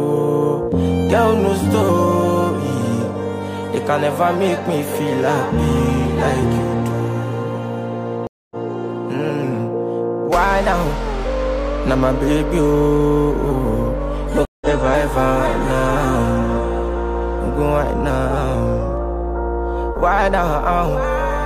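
Twice the stream connection dropped and the player reconnected with a fresh decoder, a stream reconnect: at 8.27 to 8.56 s, a 0.24 s silence, and at 14.45 to 14.67 s, a 0.16 s silence. Each time the sound resumes roughly 0.2 s and 0.15 s further on, skipping material.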